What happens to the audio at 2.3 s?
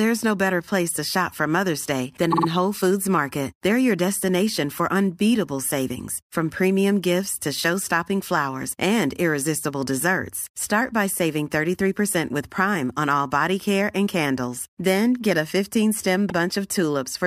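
From 2.31 to 2.47 s the speech stutters on repeated frames: one roughly 52 ms block, which fits two compressed frames, plays three extra times and adds about 157 ms. The waveform shows identical copies side by side.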